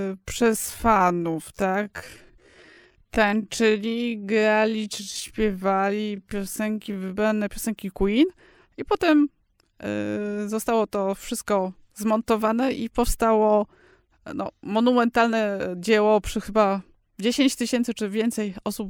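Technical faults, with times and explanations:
0.00 to 7.46 s, time-stretched section: the opening speech runs at about 0.58 times its natural pace and then snaps back to normal speed at 7.46 s, while the pitch stays unchanged throughout. This is likely the result of software lengthening the passage to fill a set duration by repeating short slices of the waveform instead of resampling it. As a result the slowed passage drags.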